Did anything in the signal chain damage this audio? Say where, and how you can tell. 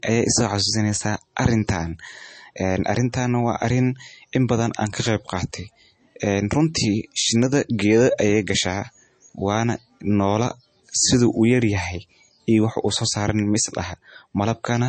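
Yes. Throughout, the speech sounds dull with nothing above 8.4 kHz, likely low-bitrate audio saved at a high bitrate. The cut-off fits a roughly 32 kbit/s MP3 source, re-encoded without restoring what the first encoding removed.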